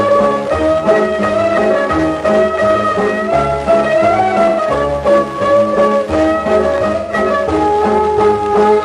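At 4.49 to 4.60 s and again at 6.96 to 7.12 s, AAC frame loss with concealment leaves smeared, noisy patches of about 85 and 128 ms, which fits two and three lost frames. The decoder repeats the last spectrum, so a spectrogram shows blurred, stretched bands with softened edges.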